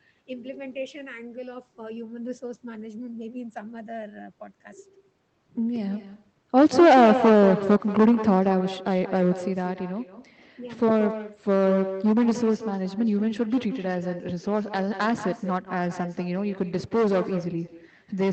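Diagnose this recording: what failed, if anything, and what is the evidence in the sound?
The failure is at the call-processing stage: an echo with no canceller. It runs through the whole speech clip. Every phrase is followed by a fainter copy about a fifth of a second later. That copy sits about 12 dB below the direct voice. It sounds thinner. The far end is playing the call on a loudspeaker, and its microphone is picking it up. Nothing cancels that pickup, so it returns after the network round trip. It is layered over a call codec that cuts off above 8 kHz.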